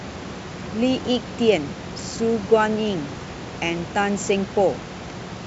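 No faults detected in the speech; room noise sits about 14 dB below it, and the G.722 wideband path at 64 kbit/s leaves at most faint coding traces.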